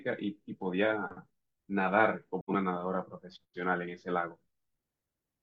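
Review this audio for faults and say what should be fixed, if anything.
AAC frame loss with muting at 2.40 to 2.50 s. About 85 ms of speech fades to silence and back, matching two lost frames. Add error concealment or retransmission to prevent it.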